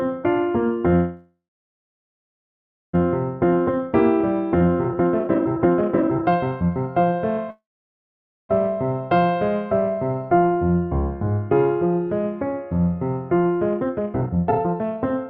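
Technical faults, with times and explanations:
0.95–2.95 s, call audio freeze: Incoming packets were likely held up and the jitter buffer ran dry, so the receiver stretched the last sound into a brief fading buzz that falls to silence for about 1.54 s. When delivery resumes the audio picks up where it stopped, so roughly 1.98 s of gap has been inserted, nothing is lost, and the delay grows by that amount.
3.37–7.49 s, jitter buffer speed-up: With the backlog now over its target, the receiver drains it by cutting out short pitch-period slices again and again. The sound plays at 146% speed, hurried but at unchanged pitch, and around two seconds of accumulated delay is removed.
7.50–8.51 s, call audio freeze: The buffer likely empties once more. A short decaying buzz gives way to about 0.88 s of silence, then the audio continues intact. This pause adds about 0.99 s of delay.
13.71–15.25 s, jitter buffer speed-up: The same catch-up process runs harder, at 165% speed. 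The sound is clearly rushed while its pitch stays put, and about a second of excess buffered delay is trimmed away.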